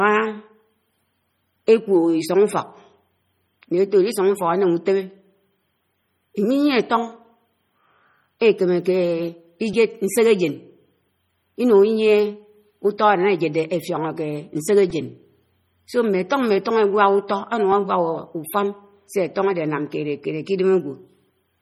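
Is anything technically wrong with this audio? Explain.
Yes, there are two problems.

Throughout the speech, heavy damage is heard that likely comes from MP3 compression at a low bitrate, roughly 32 kbps. Starved of bits, the encoder drops weak frequency lines frame by frame, giving a watery, swirly sound. A spectrogram shows flickering, patchy detail and nothing above 20.9 kHz.

At 14.90 s there is a repeated buffer. When fresh audio came late, the player replayed its last block three extra times. The block length fits a 128-sample buffer of about 2.67 ms. This is heard as a click or brief buzz. The waveform shows the identical tiny segment copied back to back with hard joins.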